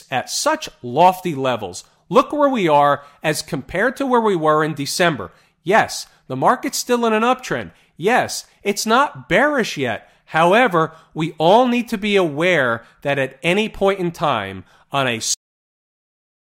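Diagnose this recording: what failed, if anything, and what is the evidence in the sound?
The speech has a cut-off end: right after "in time on a", at about 15.34 s, the sound stops mid-sound and drops straight to digital silence through to 16.40 s, with no decay at all. That points to the storage or capture-buffer stage. The final buffers of audio were never written out, so the file just holds silence where that last second of speech should be, rather than anything fading away naturally.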